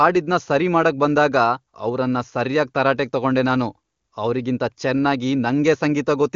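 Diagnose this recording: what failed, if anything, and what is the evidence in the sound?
Nothing failed; no faults found.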